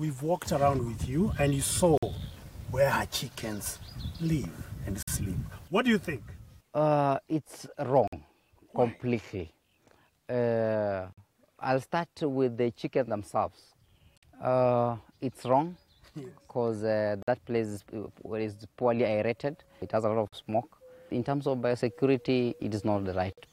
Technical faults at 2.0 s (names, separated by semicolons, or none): gap between chunks